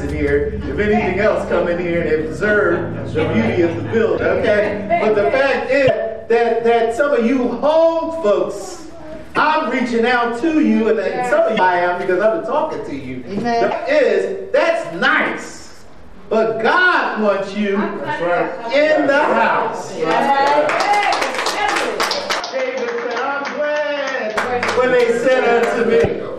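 At 4.17, 5.87, 9.34, 11.56 and 13.70 s the sound skips ahead with a brief chirp or noise burst lasting about 30 ms, roughly one 26 ms frame. This is likely a broken MP3 bit reservoir: after missing frames, the decoder borrows leftover bytes from the wrong frame. Each glitch shows as a thin vertical smear on a spectrogram and a small discontinuity in the waveform.

From 22.40 to 24.36 s the input likely switched to a poorer device. The band stops abruptly at 6.6 kHz, leaving an empty strip above it on the spectrogram. The level drops about 5 dB and new background noise sits about 30 dB below the signal. There is no gap at the switch.

At 26.03 s the same reservoir glitch returns for about 30 ms.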